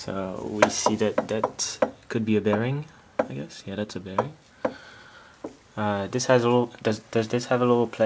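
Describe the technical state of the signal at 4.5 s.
At 4.5 s the signal is intact, with no dropout, glitch or distortion, only the normal band-limited sound of the call path, with nothing above 8 kHz, which fits a wideband codec such as G.722.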